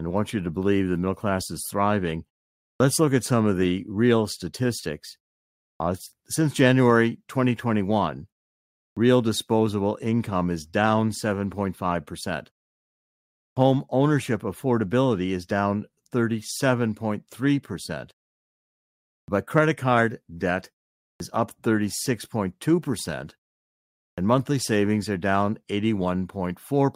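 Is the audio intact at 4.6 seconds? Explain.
Yes, the speech at 4.6 s is intact, with no dropout, distortion or other fault at that moment.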